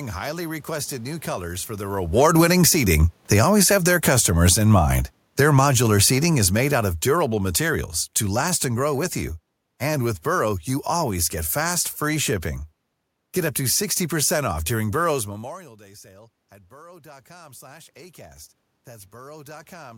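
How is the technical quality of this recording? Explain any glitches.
The speech in this recording is repeatedly pulled up and down in level by automatic gain control, with the room's background noise rising and falling along with the voice.

Automatic gain falling, 2.04 to 4.71 s and 5.24 to 8.94 s: The voice starts loud, then sinks gradually, and the room noise sinks with it. Just after the talker moves around 2 s, the AGC judges the input too hot and lowers its gain by about 11 dB. After a brief recovery it backs off again by about 8 dB over nearly four seconds.

Automatic gain rising, 2.64 to 3.25 s and 16.87 to 19.93 s: Voice and background swell together. The first rise, about 8 dB in roughly 0.6 s, briefly interrupts the downward ride. The later rise, about 6 dB, follows the talker moving away around 15 s, which drops the input by about 24 dB. The AGC slowly lifts its gain to compensate but recovers only part of the loss by the end of the clip.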